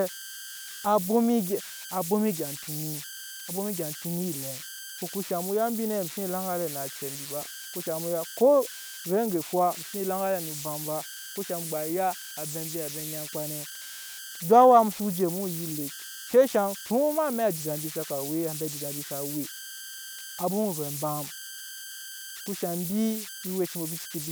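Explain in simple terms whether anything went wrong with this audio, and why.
Yes, something went wrong. Converter idle tones run through the whole speech clip. A tone near 1.5 kHz appears in pauses, and grainy noise sits under quiet moments.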